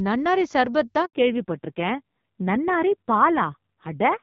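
At 1.05 s a handover gap cuts the speech for 80 ms, until 1.13 s, as the call switches networks and no frames arrive. The sound fades out within a few tens of milliseconds. The waveform drops to a flat line, and the spectrogram shows a blank vertical band.

From 1.13 s to the end, a fallback to narrowband removes everything above 4 kHz. The speech sounds duller and rougher, which fits a drop from HD Voice at 12.65 kbit/s to a 5.9 kbit/s narrowband codec. On the spectrogram, energy stops at a sharp horizontal ceiling at 4 kHz.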